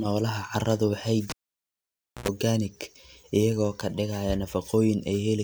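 Cable pulled and plugged in at 1.30 s: pop, roughly 0.94 s of near silence, a 90 ms burst of 60 Hz mains buzz as the tip reconnects, then another pop at 2.28 s.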